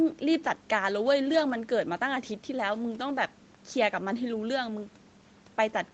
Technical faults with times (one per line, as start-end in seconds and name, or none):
none